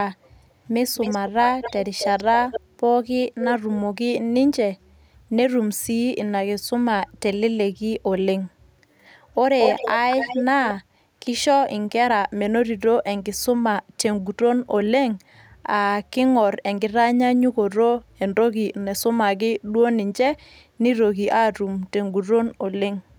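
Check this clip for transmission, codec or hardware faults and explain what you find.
There is an echo leak in this speech clip. A faint-to-strong delayed copy of the speech trails the talker in short scraps at 0.94, 1.62, 1.98, 2.51 and 3.41 s, about 263 ms behind, and again at 9.6 and 10.18 s, about 231 ms behind. Some scraps are nearly as loud as the speech itself. The likely cause is a loudspeaker on the far end whose echo canceller let part of the playback through and sent it back.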